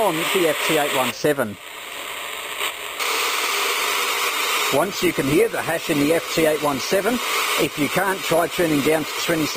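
At 3.74 s the audio drops abruptly to a lower quality and stays there to the end, with no gap. This is an adaptive stream at a lower bitrate. Codec artefacts rise. This fits a switch from about 64 kbit/s Opus to about 16 kbit/s as the connection slowed.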